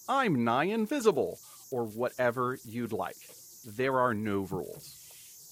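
A whistle around 7 kHz sits about 24 dB below the speech throughout: converter idle tones, from an undithered delta-sigma converter cycling through repeating bit patterns.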